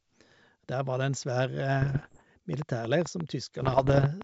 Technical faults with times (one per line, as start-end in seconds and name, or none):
1.82-2.23 bit errors on an ADPCM link
2.54-4.22 train of clicks
3.62-4.06 bit errors on an ADPCM link